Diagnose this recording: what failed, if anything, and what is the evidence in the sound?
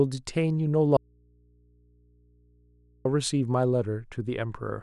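Audio dropout to a faint residue, 0.97 to 3.05 s: speech cuts abruptly to mains hum about 35 dB down, likely an open analogue input.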